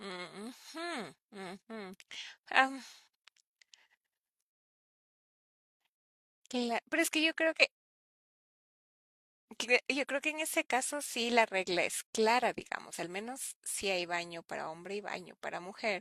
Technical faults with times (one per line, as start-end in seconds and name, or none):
none